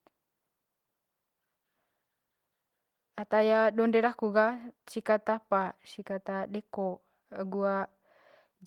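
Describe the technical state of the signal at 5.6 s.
The speech signal at 5.6 s is intact, with no audible fault at that moment.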